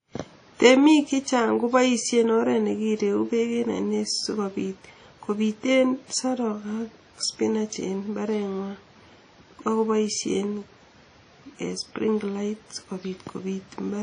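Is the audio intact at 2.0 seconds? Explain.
No. At 2.0 s, as across the whole speech clip, the sound points to a low-bitrate transform codec, likely WMA compression at around 32 kbps: long blocks smear quantisation noise over tens of milliseconds, leaving a ringing, washy hiss and nothing above 10 kHz.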